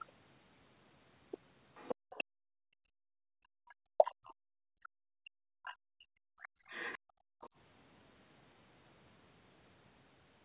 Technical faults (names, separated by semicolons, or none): other side's voice leaking through; background gated by the echo canceller; speech suppressed in double talk